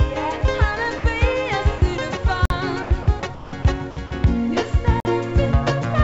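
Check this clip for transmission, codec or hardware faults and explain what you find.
Two kinds of fault are present, both brief interruptions. They are heard over a G.722 call path at 64 kbps, with nothing above 8 kHz.

Sound dropped by the voice detector: at 0.98–1.04, 1.78–1.82, 2.83–2.91, 3.03–3.07, 3.21–3.23, 3.35–3.53, 3.63–3.65 and 4.07–4.11 s, the sound gives way to a steady hiss lasting 20 to 180 ms. The likely cause is the sender's detector misjudging quiet sound as background and halting transmission, so the receiver filled in comfort noise.

Gap between chunks: at 2.45–2.50 and 5.00–5.05 s the audio stops dead for about 48 ms, about 2.5 s apart. Nothing is lost. Each 2.5 s chunk is simply followed by a silent hole before the next one begins.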